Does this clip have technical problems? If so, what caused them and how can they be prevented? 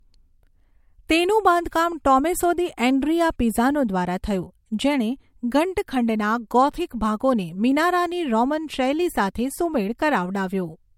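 Yes. Throughout the speech there is nothing above 16.6 kHz, and the top end has the smeared, watery quality of a low-bitrate MP3 even though the file itself is large. This is likely low-bitrate audio saved at a high bitrate, which fits a 64 kbit/s MP3 later re-encoded at 256 kbit/s. The second encode preserves the first one's losses but cannot bring back the removed detail. To prevent it, export from the original uncompressed source rather than from a compressed copy.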